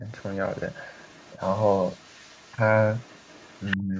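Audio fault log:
0.0–0.05 s and 3.77–3.95 s, speech suppressed in double talk: the speech briefly dips, slightly at the start and by about 20 dB near the end, likely because the echo canceller turned everything down while both sides talked.
0.08–3.77 s, other side's voice leaking through: a second voice runs faintly under the speech, around 30 dB down, likely loudspeaker playback that the echo canceller left in the microphone signal. Unlike room reverberation, it is a separate voice, not a tail of the talker's own.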